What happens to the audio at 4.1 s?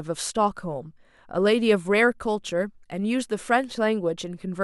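Nothing goes wrong at 4.1 s: the speech there plays through intact, with no dropout, click, distortion or other fault.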